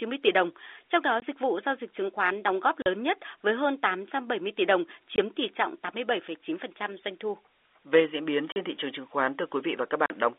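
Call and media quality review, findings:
Packet loss filled with silence: hard-edged dropouts at 1.20–1.22 s (before "dịch vụ giao dịch"), 2.82–2.86 s, 5.16–5.18 s, 8.52–8.56 s and 10.06–10.10 s. Receiver plays silence. Gaps of 20 ms and 40 ms point to 20 ms packets, unlike concealment, which would smear rather than cut. The G.711 telephone coding is band-limited.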